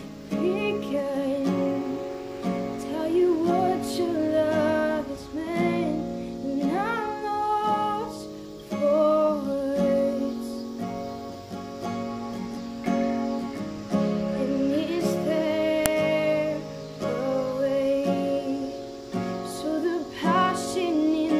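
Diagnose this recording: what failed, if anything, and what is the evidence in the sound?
A file header played as audio, introduced at the storage or file-assembly stage, is the failure here. At 15.86 s there is a single sharp, loud click, about a millisecond long, that stands apart from whatever the signal around it is doing. It fits a second WAV piece joined on without stripping its header, so a few dozen header bytes are read as sample values. Unlike a buffer-underrun click, there is no gap or repeated audio around it, and it does not follow the signal's level the way clipping does.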